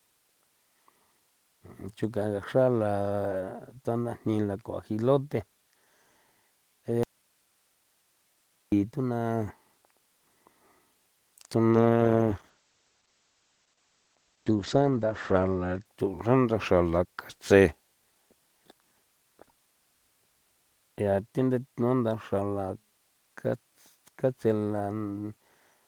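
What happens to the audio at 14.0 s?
At 14.0 s the audio is inside a call bitrate drop lasting from 11.77 to 15.91 s. The bandwidth estimate fell, so the encoder was pushed from 32 kbps down to 12 kbps and held near that floor for about 3.75 s. At 12 kbps Opus quantises more coarsely and narrows the audio band from 20 kHz to 8 kHz, so the speech turns muffled and rough until full quality returns just before "thusan ndaxra la katse".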